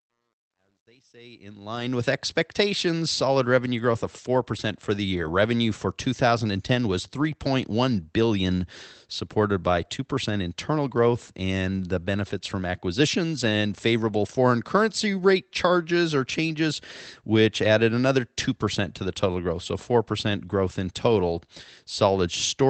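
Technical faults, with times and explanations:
0.00–2.08 s: truncation distortion on a fade. As the sound fades in, the quiet start turns gritty, worst from 0.00 to 1.37 s. The fade stage kept too few bits without dither, which fits about 11 bits. Low levels collapse into coarse square steps.
1.75–1.81, 5.23–5.29, 7.19–7.25, 14.07–14.09 and 17.63–17.65 s: lost packet rebuilt from error correction. Each spot sounds briefly rougher and noisier, with no gap. The first three last 40 ms, which fits two lost packets. The last two last 20 ms, which fits one. The Opus decoder played the low-bitrate copies carried in the following packets.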